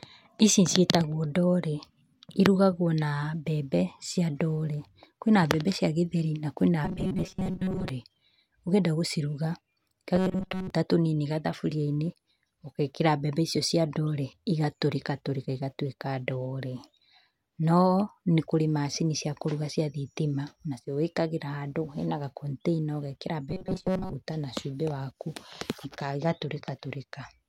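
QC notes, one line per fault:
6.85–7.89 s (after "cia gĩtheri na kwĩna"), 10.16–10.70 s, 23.49–24.14 s (between "gakontĩina ugekĩra" and "na cubĩ waku"): robotic sound from repeated short buffers. The speech becomes a rigid metallic buzz fixed at 188 Hz, likely from a 5.3 ms chunk replayed in place of most of the real audio.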